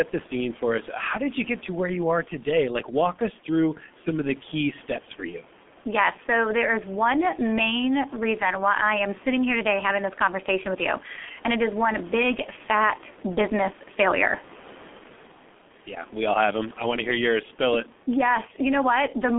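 Throughout, the G.723.1 codec squeezes the speech into 6.3 kbit/s. A spectrogram shows nothing above 3.8 kHz, and the speech sounds muffled and hoarse, with smeared consonants.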